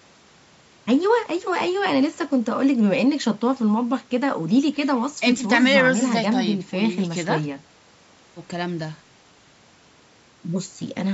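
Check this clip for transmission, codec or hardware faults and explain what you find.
No transmission or hardware faults found in this speech; the band stops at 8 kHz and the lowest bass is trimmed by the call's microphone processing, both normal for that path.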